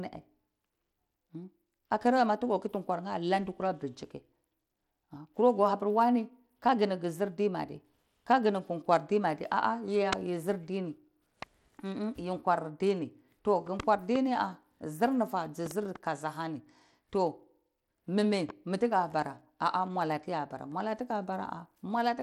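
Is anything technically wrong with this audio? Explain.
Yes. Bluetooth SBC compression is the likely cause of damage running throughout the speech. A starved bit pool, fitting about 96 kbps, coarsely quantises the sub-bands, leaving gritty, flickering treble and nothing above 19.4 kHz.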